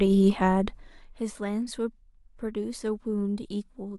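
Zipper noise runs from 0.69 to 1.22 s, where the speech level drops by around 10 dB in unsmoothed 1 dB jumps, some twenty a second. Each jump leaves a tiny click, so a fine ticking rides on the voice throughout the fade.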